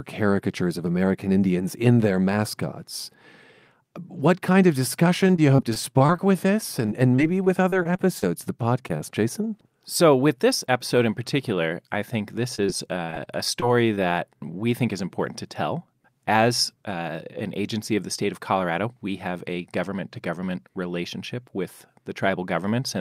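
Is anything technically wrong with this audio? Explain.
Yes. Repeated packet loss (robotic sound) occurs at 5.27–6.20 s, 6.86–8.48 s and 13.06–13.99 s, with 8, 10 and 5 gaps respectively, none longer than about 25 ms. Each lost packet is patched by extending the preceding sound, and the gaps recur closely, so the audio turns choppy and robotic. On a spectrogram this shows as smeared, repeated slices. The waveform looks repetitive.

Short concealed packet loss occurs at 8.88–8.91 s, 8.97–9.01 s, 12.55–12.60 s and 12.66–12.70 s, each missing about 20 ms. The decoder continues the last pitch or shaped noise, then blends back into the real audio, giving a brief smear visible as a short, blurred patch.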